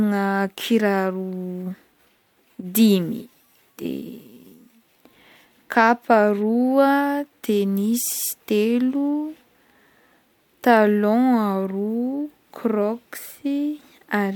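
No technical fault can be heard anywhere in the recording, and the signal stays steady and intact throughout.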